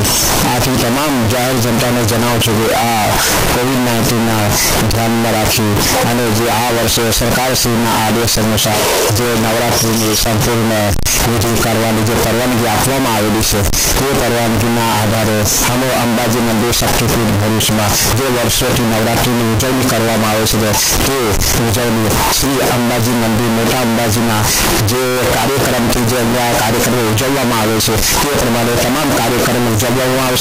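The 16-bit samples were likely read with signed and unsigned mixed up, so every zero crossing jumps across the full range: loud, harsh distortion throughout, with quiet passages as loud as the rest.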